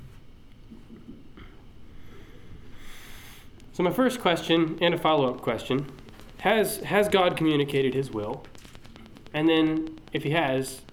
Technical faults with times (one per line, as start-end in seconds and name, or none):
4.36-10.90 train of clicks